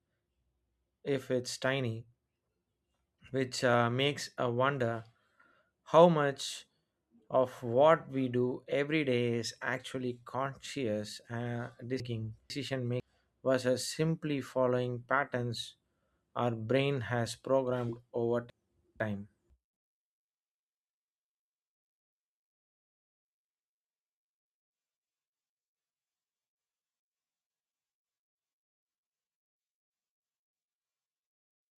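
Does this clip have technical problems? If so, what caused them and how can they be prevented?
Yes. Chunks out of order occur at 12.0–13.0 s, 18.5–19.5 s and 26.5–27.5 s. Within each second, two half-second chunks play swapped, leaving a jumbled moment. This can be prevented by buffering audio chunks with sequence numbers and reordering them before playback or writing.

A switch to a distant microphone runs from 19.76 s to 24.69 s. The sound suddenly turns roomy and thin, drops by about 5 dB and gains background noise only about 30 dB below it, likely because the close microphone failed and a farther one took over. This can be prevented by monitoring the close microphone's signal during recording and securing its connection, cable or wireless link.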